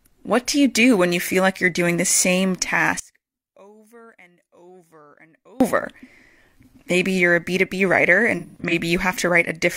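From 3.00 to 5.60 s the speech drops by about 31 dB and nearly disappears. The centred content and low end are almost entirely gone, leaving only a faint residue of the sound. This is the signature of cancellation on a mono sum, and the likely cause is one channel inverted: with one stereo channel in reversed polarity, everything the two channels share subtracts out, and only their small differences survive.

Between 8.37 and 8.73 s the audio breaks into smeared, phasey patches with a grainy, noisy texture. The disturbance is scattered across roughly a third of a second, and the longest continuous stretch lasts about a tenth of a second. This is AAC frame loss with concealment. Several frames went missing, and the decoder filled each gap by reusing the last good spectrum with altered phase and energy, which fits about five lost frames totalling around 213 ms.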